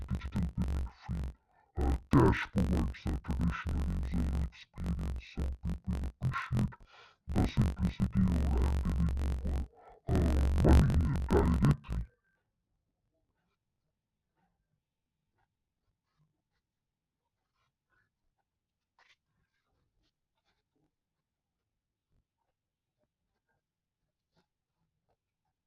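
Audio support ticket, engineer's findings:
Speech an octave low, doubled and choppy, whole clip. Interleaved audio read as planar: each block's first half taken as left, second as right, both at half speed. Chop at 46.9 Hz, 21.33 ms blocks, fits 1024-sample buffers. Suspect channel-format conversion.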